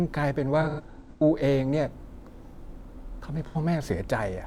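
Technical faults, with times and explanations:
0.61–1.23 s: AAC frame loss with concealment. The speech turns smeared and noisy in several short patches, the longest around a tenth of a second, adding up to about 384 ms. The decoder lost scattered frames, consistent with roughly nine, and filled each gap by reusing the last good spectrum.
3.46–3.57 s: AAC frame loss with concealment. A brief phasey, blurred patch of about 85 ms interrupts the speech. A short run of frames, consistent with two, went missing, and the decoder substituted a reconstruction from the preceding spectrum instead of leaving silence.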